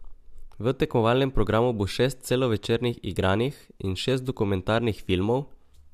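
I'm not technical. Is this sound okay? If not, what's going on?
Yes, it sounds fine, with nothing going wrong anywhere in the recording, so there's nothing to worry about here.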